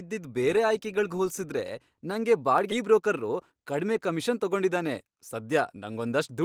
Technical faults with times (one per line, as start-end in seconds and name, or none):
1.14 dropped samples
2.58 dropped samples
2.71-2.73 skip ahead
2.83-6.43 jitter buffer speed-up
3.80 dropped samples
5.90 dropped samples